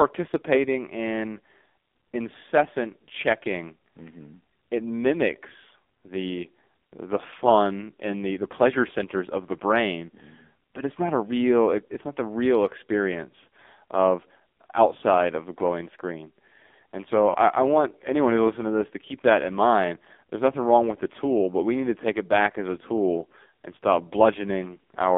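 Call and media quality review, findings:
AMR narrowband mobile codec throughout: heavy codec damage, band limited to 250 Hz to 3.6 kHz, nothing above 4 kHz. Buzzy, synthetic speech from pulse-excited vocal tract model starved of bits, consistent with a low mode around 5.9 kbps.

Lost AMR speech frames, 17.30 to 17.52 s: brief warble and drawn-out dip, speech thin on recovery. Decoder concealment repeating last good pitch and filter settings with falling gain; the gap points to two consecutive frames, about 40 ms, dropped after radio checksum failure.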